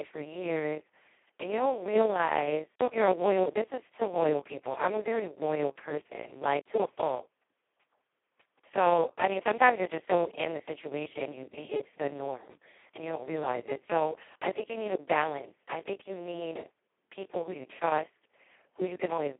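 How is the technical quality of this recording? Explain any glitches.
Pretty rough, honestly. The whole thing has been squeezed through a Speex codec at a very low setting. The damage is heavy and runs from start to finish.

From start to end, the speech sits in a narrow phone-style band of about 300 Hz to 3.5 kHz, with nothing above 3.8 kHz. With so few bits for the excitation, Speex gets close to vocoder territory, so voices come out hoarse, buzzy and fairly robotic. That points to a bitrate of around 2 kbps.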